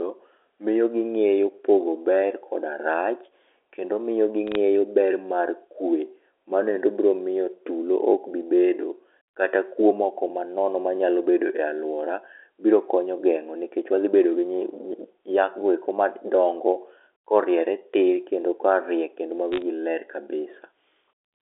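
At 4.47 to 4.55 s, between "koda rach kendo miyo" and "ber mar kwe", and again at 19.52 to 19.62 s, right after "tir kendo korie kendo", the speech carries a brief burst of crackle: bit errors on a digital phone line. On the G.711 telephone path, each flipped bit corrupts a single logarithmically coded sample, and the sign or high-order bits produce sharp ticks at an error rate of a few tenths of a percent. A waveform shows isolated single-sample spikes, and a spectrogram shows thin vertical broadband lines.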